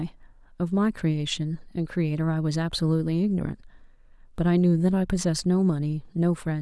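No technical fault can be heard anywhere in the speech recording. There is nothing to locate or explain along the timeline.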